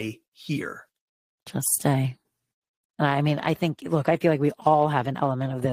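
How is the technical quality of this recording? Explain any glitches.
The technical quality is good, and there are no glitches to explain.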